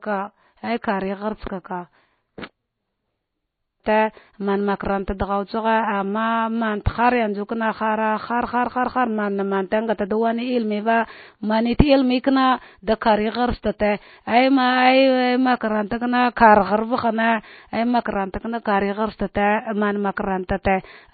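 MP3 compression, running through the whole clip: the speech has no content above about 4.5 kHz, and the damage is plainly audible. With few bits to spend, the encoder has likely chopped off the treble at that fixed point and discarded the weaker frequency lines, which then flicker on and off between frames. The result is a watery, swirling texture with chirpy, metallic s sounds and softened consonant onsets, which fits a very low bitrate of around 24 kbps.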